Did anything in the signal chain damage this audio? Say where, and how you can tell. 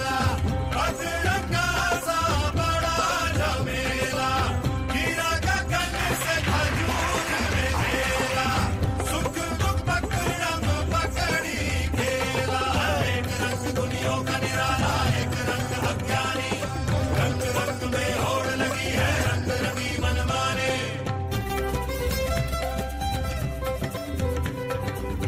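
No, nothing in the signal chain stood out as having damaged this audio on listening.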